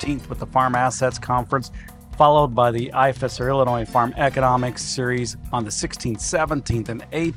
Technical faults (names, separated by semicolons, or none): none